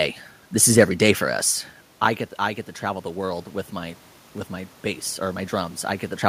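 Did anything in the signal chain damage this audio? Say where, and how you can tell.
Yes. After "for us I get", from 2.38 to 4.07 s, voice and room noise swell together by about 4 dB until "with my bass". This is automatic gain rising in call processing: the input dropped about 13 dB, so the gain control gradually pushed its gain up.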